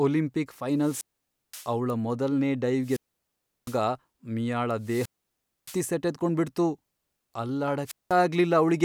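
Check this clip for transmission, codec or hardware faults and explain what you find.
The speech is interrupted four times by wireless microphone squelch dropout, at 0.77–1.73 s, 2.81–3.81 s, 4.81–5.86 s and 7.85–8.15 s. Each time, the analogue FM radio link weakens until the receiver's squelch shuts the output off. A short swell of hiss gives way to near silence lasting about 0.52 s, 0.71 s, 0.62 s and 0.19 s respectively, and the speech then comes back.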